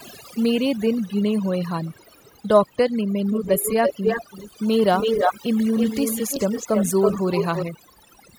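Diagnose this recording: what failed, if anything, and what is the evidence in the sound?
Overdone noise removal in call processing runs throughout: aggressive suppression zeroes bands near the noise estimate, leaving near-silent background with twinkling specks and a spectrogram of scattered flickering bins.

Echo leak, likely from incomplete loudspeaker echo cancellation, appears at 1.93, 3.31, 4.96, 5.77 and 7.36 s. The first is faint at 389 ms delay, and the rest are near speech level at 326 ms. The waveform shows delayed repeated envelopes.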